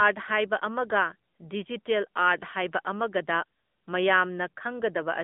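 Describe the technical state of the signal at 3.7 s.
At 3.7 s the speech is running through the AMR narrowband mobile codec, which affects the whole clip. The line passes roughly 200 Hz to 3.5 kHz, with nothing above 3.6 kHz. The codec rebuilds the voice from a vocal-tract model driven by sparse pulses, so there is a plainly audible buzzy, synthetic edge, consistent with a mid-rate mode near 10 kbps. That artificial texture is what separates it from a simple telephone-band filter, which only dulls the sound.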